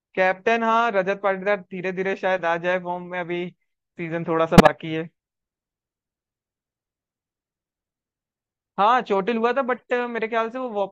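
A loud burst of noise at 4.58–4.69 s, then a much fainter blip at 9.77–9.91 s, are both corrupt frames decoded, damaged compressed frames played anyway with misplaced spectral energy.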